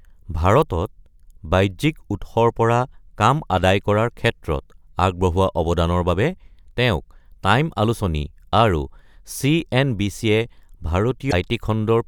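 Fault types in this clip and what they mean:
Damaged data in a compressed stream: near the end, around 11.27 to 11.33 s, bad bytes in the coded speech throw the decoder off. It loses its place and hunts for the next good frame, so you get a quick glitch about 50 ms long.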